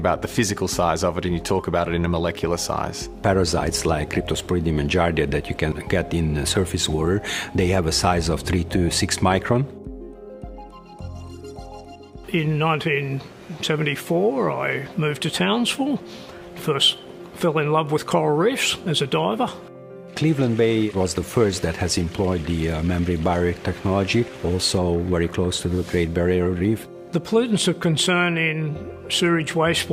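No technical faults can be heard anywhere in the recording. The audio runs without any interruption, dropout or disturbance.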